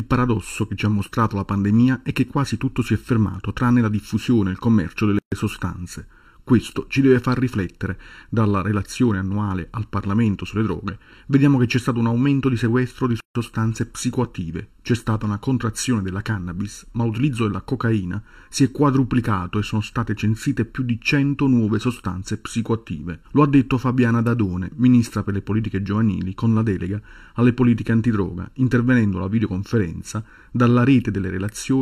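Channel delay (comb filtering) runs through the whole recording. One channel arrives a fraction of a millisecond late, and when the two are summed to mono their shared content cancels at evenly spaced frequencies starting near 700 Hz, leaving the audio hollow and phasey with fixed spectral notches. A gap at a join of encoded pieces appears at 5.19 to 5.32 s (133 ms) and again at 13.20 to 13.35 s (150 ms). Separately encoded segments were spliced without trimming the encoder's start-up delay and end padding, so the sound drops to silence with smeared edges before resuming where it left off.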